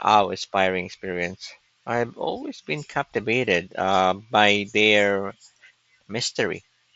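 Listening to this speech clip, nothing stood out as a technical problem; it carries the wideband Bluetooth headset sound of the mSBC codec, with nothing above about 7.7 kHz.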